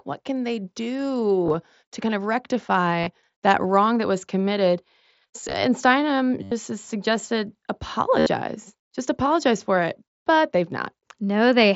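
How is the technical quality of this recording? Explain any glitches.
The recording has five brief glitches from concealed Bluetooth headset packet loss, heard over the band-limited sound of the mSBC headset codec. Voice packets between headset and phone went missing, and the receiver filled each gap by repeating a matching stretch of recent waveform. This produces short buzzy, held patches that warble as real audio resumes. They occur at 1.45–1.54 s just before "to kind of", at 3.01–3.07 s before "that wrong that was", at 5.42–5.54 s, at 6.43–6.52 s before "has suggested", and at 8.19–8.27 s. The heaviest loss, about 83 ms of audio, falls at 6.43 s.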